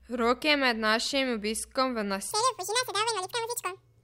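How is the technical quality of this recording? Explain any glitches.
The recording has one clear glitch: a section at the wrong speed in the closing part. From 2.31 s to the end at 4.03 s, the speech runs at twice its recorded speed, so it sounds hurried and squeaky, raised by about 10 semitones. The likely cause is that this stretch was played back or edited against the wrong clock. Tempo and pitch jump together at one instant, which sets it apart from a pitch-shift effect (where timing stays normal) or from a time-stretch (where the pitch holds).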